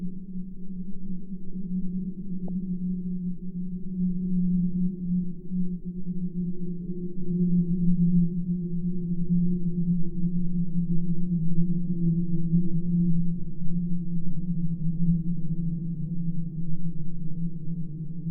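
At 2.48 s a brief watery blip of noise cuts into the sound. This is DAB burbling: weak reception let bit errors, at a rate well under a tenth of a percent, slip past error correction into the MP2 data, corrupting individual sub-bands.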